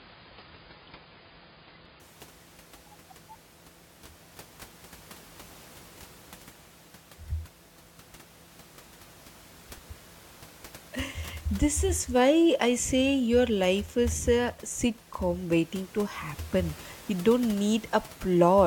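For the first 2.0 s the speech is dull and smeared, with nothing above 5.1 kHz, then brightens suddenly with no gap. That is an adaptive stream starting at a low bitrate, consistent with a low-rate AAC version, stepping up once the connection was measured.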